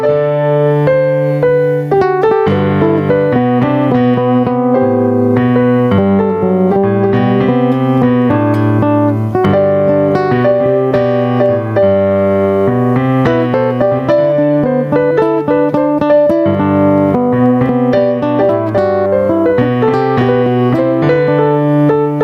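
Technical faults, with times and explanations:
Throughout, gain pumping: the gain keeps swinging by about 15 dB, so everything sounds squashed and flattened in level, likely from input gain set far too high with a fast limiter clamping down.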